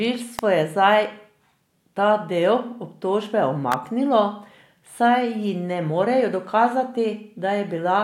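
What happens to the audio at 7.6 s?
Nothing goes wrong at 7.6 s; the speech carries on intact through that moment.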